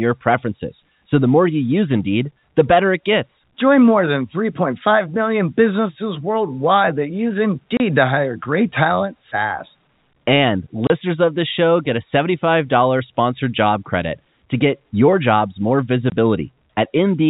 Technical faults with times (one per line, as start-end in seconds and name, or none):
7.77-7.80 packet loss filled with silence
10.87-10.90 packet loss filled with silence
16.10 packet loss filled with silence